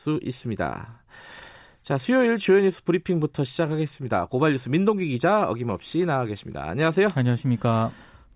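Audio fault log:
Nothing to log here: no faults turn up anywhere in this speech clip.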